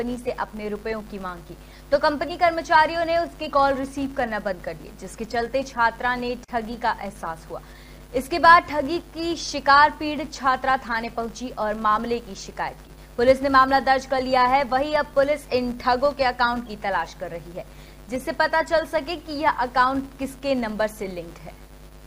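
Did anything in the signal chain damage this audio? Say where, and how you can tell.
Yes. A filter restarted on every block runs through the whole clip, from start to finish, heard as a fine buzz at 200 Hz that rises and falls with the level of the sound. The stage is block-based processing in the driver or buffer path: a filter clears its memory at each block boundary and begins from silence, so every block opens with a small transient. Those ticks repeat every 5 ms, which points to a 5 ms processing block.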